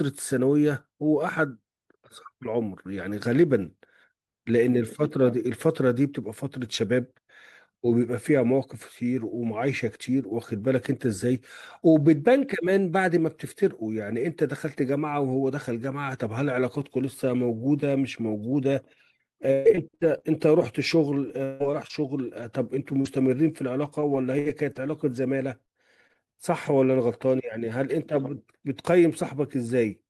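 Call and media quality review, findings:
Repeated packet loss (robotic sound), 19.53–20.22 s and 21.28–23.07 s: choppy speech. Network jitter buffer concealment stretching the last sound across holes up to 117 ms and 156 ms.

Scattered short gaps, 23.85–26.91 s: about seven brief hiccups, longest around 70 ms. Isolated lost or late packets, each patched by extending the preceding audio.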